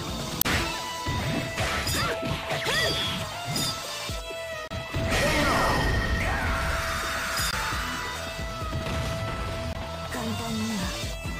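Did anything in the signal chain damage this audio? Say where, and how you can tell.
Yes: damaged data in a compressed stream, at the codec stage, with brief glitches at 0.38–0.47, 4.68–4.73, 7.50–7.54 and 9.72–9.77 s. Unlike network dropouts, these come from the decoder misreading frames, losing sync and searching for the next frame header.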